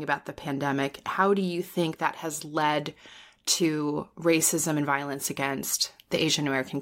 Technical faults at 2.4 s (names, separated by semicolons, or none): none